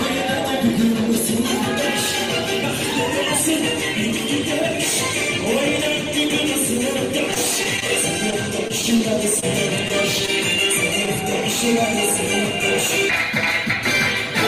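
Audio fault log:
7.31–7.90 s and 8.30–9.02 s: repeated packet loss with a robotic sound. The receiver kept patching holes by repeating the last sound. It patched six gaps in the first stretch and four in the second. About 70 ms was filled each time. Up to 60 ms went missing, which leaves a choppy texture with pieces missing.
9.40–9.44 s: short concealed packet loss. About 25 ms was rebuilt from the preceding sound, and 20 ms of real audio was lost. This gives a brief smear.
9.88–9.92 s and 10.26–10.30 s: short stall from a late packet. The jitter buffer ran dry, so the last sound was held for 16 ms and then 20 ms. Nothing was lost, but each sound lingers slightly.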